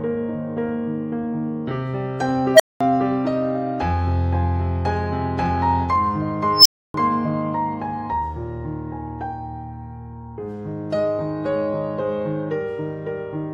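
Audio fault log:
2.54 to 2.81 s and 6.56 to 6.94 s, unstable filter: a recursive filter fed itself back with gain above unity, so its output grew without bound until the arithmetic overflowed and the filter reset. A low tone of around 700 Hz swells over about 54 ms, then a high squeal near 5 kHz over about 97 ms, each clipping harshly before the audio drops out for about 0.21 s and 0.29 s respectively.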